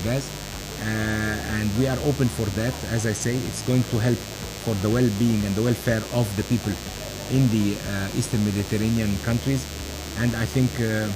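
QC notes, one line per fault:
throughout, DECT cordless phone buzz: a thin, steady buzz sits under the whole clip at roughly 15 dB below the wanted sound, with its fundamental at 100 Hz and a dense ladder of harmonics above it. A nearby DECT handset or base is transmitting a short radio burst every 10 ms, and some stage in the audio circuitry rectifies that RF. Each burst becomes a small audio pulse, and the resulting train of pulses gives the raspy, harmonic-rich tone.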